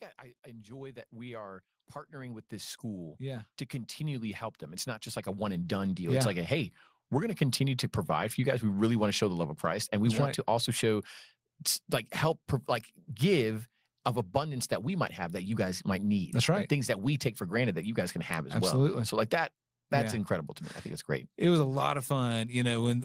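From 0.44 to 1.59 s, automatic gain rising lifts the level by about 5 dB, then again from 2.1 to 6.36 s by about 14 dB, as the control keeps judging the input too quiet. Speech and background swell together; the waveform envelope widens steadily and the spectrogram brightens across all frequencies at once.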